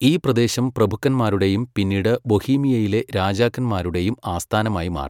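No technical faults can be heard anywhere in the recording. The speech continues without any break or audible defect.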